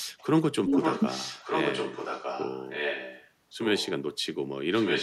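A short speech clip with two problems on the line. From 0.39 to 0.75 s the talker gets pushed right down, by something like 40 dB at the deepest point, for roughly 0.4 s: speech suppressed in double talk, likely the echo canceller clamping both sides while they overlapped. Then there's echo leak, a copy of the speech coming back 1.2 s late. It runs from 0.73 to 3.3 s at about 5 dB under the direct speech, from 3.57 to 3.9 s at about 10 dB under, and from 4.73 s to the end at about 5 dB under, likely a far-end loudspeaker whose canceller isn't fully removing what its mic picks up.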